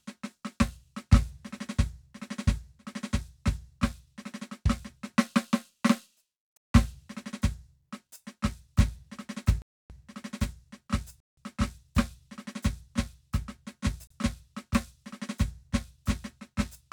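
Music, broken four times by a block of digital silence. The sound cuts out with no fade at 6.57 s, 9.62 s, 11.20 s and 14.07 s. The gaps last 0.17 s, 0.28 s, 0.17 s and 0.03 s. Both 0.17 s gaps fit an 8192-sample block left unfilled when the output buffer missed its deadline.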